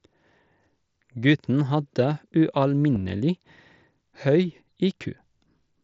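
At 2.95 s a voice packet travelling from the Bluetooth headset to the phone failed to arrive, and the receiver filled the gap by repeating the closest-matching stretch of the waveform it had just played. This is concealed Bluetooth headset packet loss. The missing stretch lasts about 7.5 ms, which fits a single lost mSBC frame, and the patch is nearly seamless. The wideband mSBC headset codec leaves only a light graininess on louder sounds.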